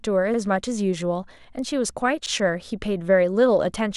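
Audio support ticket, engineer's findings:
Repeated buffer, 0.34 s and 2.26 s: 43 ms chunk replayed once, short stutter; output underrun, fits a 2048-sample buffer. Waveform shows identical back-to-back blocks with a hard seam.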